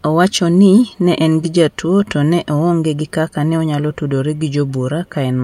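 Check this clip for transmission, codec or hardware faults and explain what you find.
The speech signal comes across intact and continuous, with nothing audible that points to a fault anywhere along the chain.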